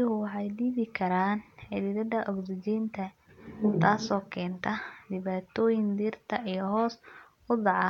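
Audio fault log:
No faults are audible anywhere in this speech recording.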